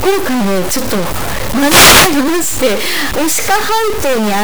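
From start to finish the speech carries a harsh, buzzy distortion, and the pauses between phrases fill with loud, gritty noise that stays present even where the signal should be near silent. The likely cause is a stuck bit: one high-order data bit held at a fixed value, so about half the samples are displaced by a step of roughly -10 dBFS. Because that bit flips with the sign of quiet values, the gaps become noisy.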